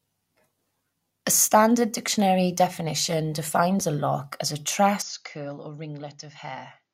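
Speech recording in which the input likely switched to a poorer device at 5.02 s and stayed there to the end at 6.94 s. With no gap at the switch, the voice abruptly turns duller, losing everything above 7 kHz, drops roughly 10 dB in level, and gains a faint new background noise.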